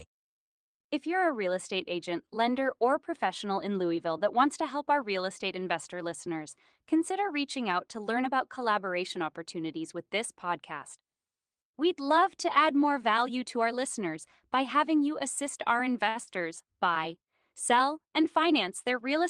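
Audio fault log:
5.59 s and 16.09 s, short stall from a late packet: a packet arrived after it was due, so the jitter buffer ran dry and the receiver held the last sound for 22 ms after "help our real estate" and 63 ms after "having you assist our". Nothing is lost, but each sound is stretched too long.
16.23 to 16.39 s, short concealed packet loss: 40 ms of audio never reached the decoder in time, so the receiver extended the preceding sound to fill the gap and then blended back in before "buy sell". The result is a brief smear or wobble where real audio was replaced.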